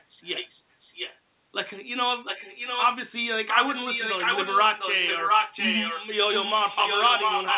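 A speech clip with an echo leak in four stretches: 0.25 to 1.19 s, 2.24 to 2.88 s, 3.48 to 6.06 s and 6.32 s to the end. A second copy of the speech trails the original by about 0.7 s. It starts roughly 10 dB down, rises to about 5 dB down, then matches the direct speech in the last two stretches. The likely cause is a far-end loudspeaker whose echo canceller let its microphone pickup return down the call. The band stops at 4 kHz, which fits a G.711 A-law call path.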